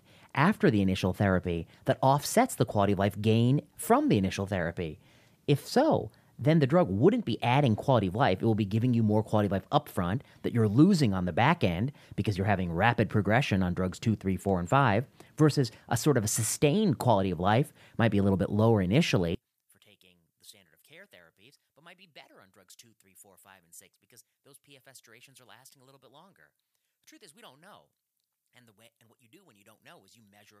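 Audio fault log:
19.35–30.6 s, one channel inverted: right after "a little bit lower" the speech falls by about 31 dB and stays faint until the end. The likely cause is one stereo channel with reversed polarity. When the two channels are summed to mono, everything they share cancels, including the centred voice and its low end. Only the small difference between the channels survives, heard as a weak residue of the speech.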